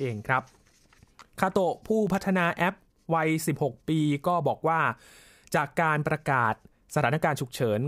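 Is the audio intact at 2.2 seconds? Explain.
No. At 2.2 seconds the speech is roughened by a short burst of gritty crackle, processor overload crackle running from about 2.07 to 2.50 s. The processor misses several tiny buffer deadlines of about 0.7 ms each, and each miss drops in a hard-edged slice of silence. The run of gaps together is heard as tearing.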